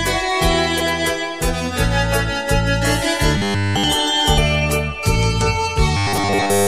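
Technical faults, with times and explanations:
0.79 s and 4.37 s, compressed frames skipped: the audio jumps ahead about 70 ms, then about 300 ms, which fits three and ten 23.2 ms frames. The overlapping frames smear each join into a soft blip.
3.38–3.84 s and 5.97–6.67 s, robotic sound from repeated short buffers: a stiff metallic 100 Hz buzz, likely a 10 ms buffer looping, entirely in the first stretch and mostly in the second.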